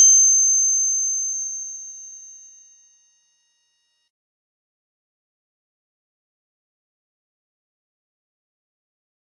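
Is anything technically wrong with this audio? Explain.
Yes. From 1.34 to 5.34 s, an adaptive stream at a lower bitrate plays after the connection slowed. Treble above 14.8 kHz abruptly vanishes and codec artefacts thicken, without any gap.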